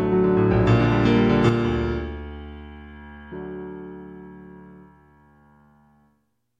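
At 1.49 s the level drops abruptly by about 6 dB and stays down through the end of the clip, with no fade or recovery. The step is consistent with one channel dropping out: the likely cause is one side of a stereo feed going silent before a mono fold-down. Material shared by both channels then arrives from only one source, halving its summed amplitude. Anything carried only in the lost channel vanishes.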